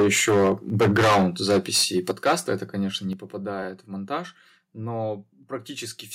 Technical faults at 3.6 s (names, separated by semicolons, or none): repeated buffer